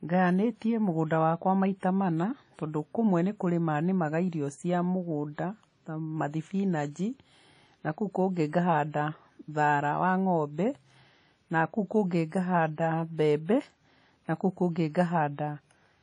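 A speech clip with plainly audible codec damage throughout. It sounds ringing and washy, and a hiss rises and falls with the speech. Nothing is heard above 10.1 kHz. This is likely WMA compression, and it fits a low bitrate of about 32 kbps.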